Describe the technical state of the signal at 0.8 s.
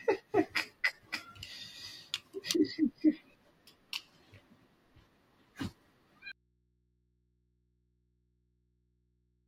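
At 0.8 s the speech signal is intact, with no audible fault at that moment.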